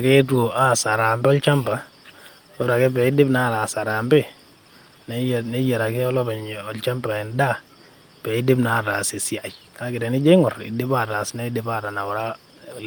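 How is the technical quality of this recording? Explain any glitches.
Nothing stood out on listening to this recording that would call for any explanation.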